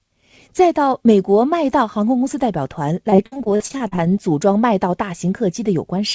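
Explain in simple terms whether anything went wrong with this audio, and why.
Something did go wrong, between 3.10 and 3.99 seconds. This is repeated packet loss, which gives a robotic sound. Over that stretch the speech breaks up in twelve small holes. The longest lasts about 60 ms. Each hole was patched by stretching the sound just before it. About a third of that stretch is patched sound, so it turns choppy. The call path was working normally, though it carries nothing above 8 kHz.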